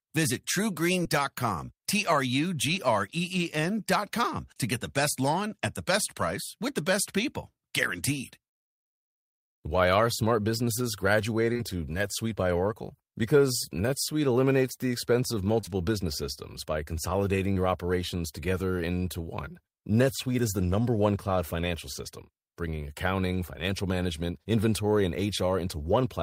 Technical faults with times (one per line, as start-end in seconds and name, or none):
1.03-1.07 short concealed packet loss
11.53-11.61 short concealed packet loss
15.61-15.73 short concealed packet loss
17.53-17.57 short concealed packet loss